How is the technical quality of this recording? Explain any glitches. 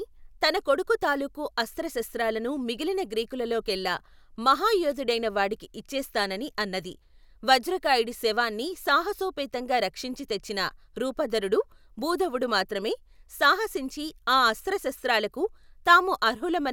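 The recording shows no technical glitches anywhere in the signal, so there is nothing to explain.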